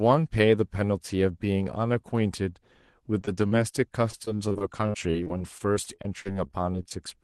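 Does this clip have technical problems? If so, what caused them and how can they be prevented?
Yes. Repeated packet loss makes the speech choppy and robotic from 3.21 to 3.75 s and again from 4.11 to 6.93 s. Short holes, none longer than 40 ms, were patched by stretching the last sound. A steadier connection with forward error correction would prevent it.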